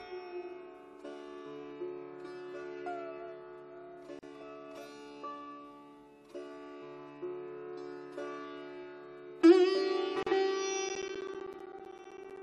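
The sound breaks twice with a gap at a join of encoded pieces: about 38 ms of silence from 4.19 to 4.23 s and about 37 ms from 10.23 to 10.27 s, six seconds apart. The regular spacing fits separately encoded segments joined without trimming encoder delay and final-frame padding. On a waveform each gap is a flat strip with smeared edges. A spectrogram shows a narrow blank column with slight smearing at the boundaries. The sound then resumes where it stopped.

From 10.89 to 12.37 s there are periodic USB or driver dropouts. Roughly twenty short chunks of signal, each around 10 ms, are replaced by silence every 64 ms, giving a steady ticking. This points to a background task stalling the bus or audio driver at a fixed interval. A waveform shows evenly spaced notches down to silence. A spectrogram shows a comb of thin vertical breaks with broadband click energy at their edges.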